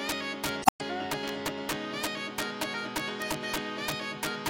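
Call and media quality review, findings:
Violent cracks on loud peaks throughout, far harsher than clipping. Integer overflow in gain or mixing stage: signal driven about 9 dB past full scale, and a small fraction of samples wrap to the opposite sign, flipping across the full range instead of being limited.

Glitch from 0.62 to 0.81 s, with a timing jump of about 100 ms. Damaged data in the compressed stream: decoder misreads corrupted frames, loses sync, and resumes at the next valid frame header, so the audio does not continue seamlessly.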